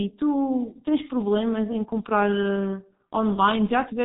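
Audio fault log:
Throughout: G.723.1 codec, heavy damage; speech is muffled and hoarse, nothing above 3.8 kHz, consonants smeared by long 30 ms frames at roughly 6.3 kbit/s.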